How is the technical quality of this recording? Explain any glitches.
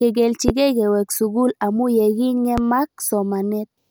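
Two loud pops break up the speech. The first comes at 0.48–0.52 s and stands well clear of the voice. The second, at 2.58–2.61 s, is a bit less prominent but still pokes out above the speech. Each is a single sharp hit, most likely an electrical transient from a plug, a switch, static or a driver glitch. That spike gets summed into the signal, so you hear a quick thump riding on top while the speech carries on underneath.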